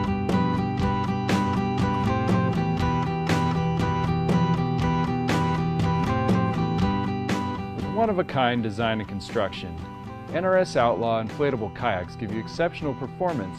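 No technical faults are audible.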